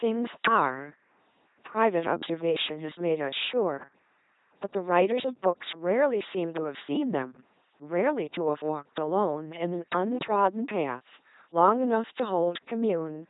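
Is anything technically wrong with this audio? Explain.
Yes, the whole speech clip has gone through an LPC-10 vocoder, which fits a 2.4 kbit/s rate. Each moment is rebuilt as buzz or hiss through a small vocal-tract filter, so it sounds robotic and mechanical, with stray buzzes and hisses and nothing above 3.8 kHz.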